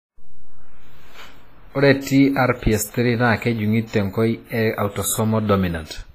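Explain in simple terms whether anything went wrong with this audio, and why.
Throughout the speech there is a ringing, washy quality, with hiss that swells and fades along with the sound and nothing above about 14.6 kHz. The likely cause is heavy WMA compression, which smears coding noise over tens of milliseconds and discards quiet detail.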